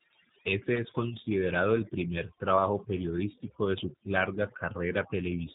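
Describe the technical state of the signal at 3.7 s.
At 3.7 s the speech carries overdone noise removal, present throughout: frequency bands near the noise estimate are pulled down hard, leaving a lowered background that breaks up into twinkling specks. A G.729 codec also runs through the whole clip, rebuilding speech from a vocal tract filter and sparse pulses. It sounds plainly rough and synthetic, consistent with 8 kbit/s, with nothing above 3.9 kHz.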